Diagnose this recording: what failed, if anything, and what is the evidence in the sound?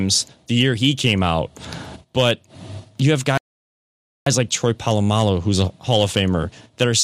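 Crackle sits on the loud syllables of this speech at 0.60–1.29 s, 2.18–2.31 s, 3.11–6.22 s and 6.81–6.83 s. This is hard clipping at a converter or gain stage: peaks driven about 3 to 4 dB past full scale are cut flat, spraying high harmonics.

At 3.38 s the speech drops to dead silence, then picks up at 4.27 s exactly where it left off, with nothing missing. That is a rebuffering stall in network playback: the player's buffer ran dry and it waited for more data, adding 0.89 s.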